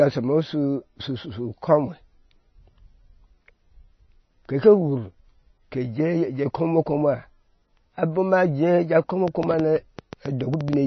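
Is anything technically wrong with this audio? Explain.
Yes, there are two faults. Throughout, the speech carries plainly audible MP3 compression damage. Nothing sounds above 6 kHz, and the watery, swirling texture and smeared consonants suggest a starved encoder, likely a very low bitrate near 23 kbps, zeroing weak frequency lines frame by frame. That fluttering texture distinguishes it from a simple low-pass filter.

From 9.28 to 10.74 s a train of clicks ticks over the sound, around 15 similar pulses at about 8 per second, spaced unevenly and peaking roughly 10 dB above the speech. They continue through pauses, which points to an external source, likely interference or a faulty connection, rather than codec artefacts.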